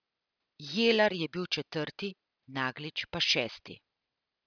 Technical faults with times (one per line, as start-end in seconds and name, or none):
none